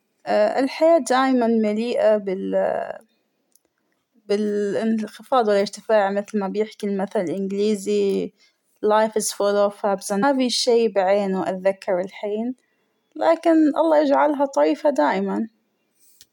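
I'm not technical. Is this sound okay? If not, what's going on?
No. At about 10.22 s there is a stream segment skipped: most likely one chunk of the stream never arrived, and the player simply jumped on to the next chunk instead of waiting. That leaves a gap in the speech, so after "اوف أبس" the talking lurches abruptly forward to "شى بعينه أتذكره الحين", with a tiny blip at the join and part of what was said missing.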